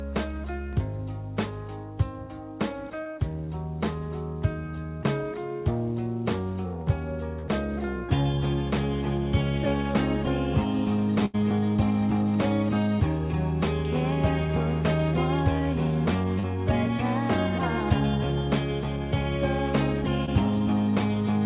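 At 3.04 to 3.07 s and 7.39 to 7.45 s there is short concealed packet loss. A few tens of milliseconds of the call arrived too late to decode: about 20 ms at the first point and 40 ms at the second. The receiver covered each gap by extending the preceding sound and then blended back into the real signal, so each is heard as a quick smear or wobble rather than a silence.

From 11.25 to 11.36 s comes a burst of packet loss, about 80 ms of consecutive audio lost. What sets it apart from the short losses is its length. The concealment holds the last sound long enough to decay audibly, into a fading buzz or hiss, before the audio resumes further along with that stretch missing.

Two more short concealed losses follow, at 16.40 to 16.45 s (about 40 ms) and 20.25 to 20.29 s (about 20 ms). Both are brief smears like the first pair. Throughout, the band stops at 4 kHz, which fits a narrowband G.711 mu-law call at 64 kbps.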